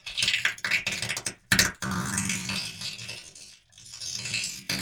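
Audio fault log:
1.82 to 4.81 s, time-stretched section: the pace abruptly slows to 0.58 times normal speed through to the end while pitch stays unchanged. The sound drags, likely because software lengthened this stretch by repeating short slices to preserve pitch.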